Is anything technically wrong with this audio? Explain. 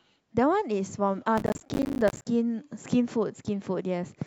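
Yes. From 1.38 to 2.25 s there is processor overload crackle over the speech. The processor kept missing its deadlines for buffers of around 10 ms, dozens of times. Each miss dropped in a short hard-edged silence, giving a gritty, tearing crackle.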